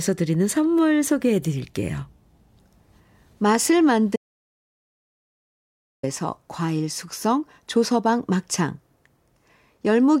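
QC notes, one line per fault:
4.16–6.03 s, audio dropout to silence: the speech cuts off abruptly and about 1.87 s of digital silence follows, with no room tone or background beneath it, before the speech resumes just as suddenly. That dead-flat gap means the recording chain kept writing silence while nothing was reaching it, likely because the input was briefly disconnected, a link failed or a mute was engaged. Whatever was spoken during those 1.87 s is not recoverable.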